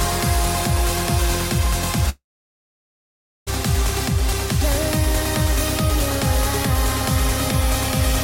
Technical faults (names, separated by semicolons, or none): long network dropout